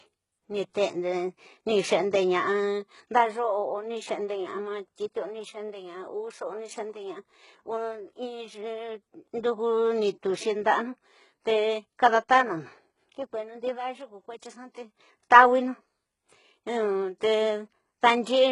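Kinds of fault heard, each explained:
HE-AAC compression: the encoder likely coded only the lower spectrum at a very low rate, about 12 kbps, and rebuilt the treble by copying lower bands upward. The speech's s sounds come out gritty and metallic, with heavy damage and nothing above 11.1 kHz.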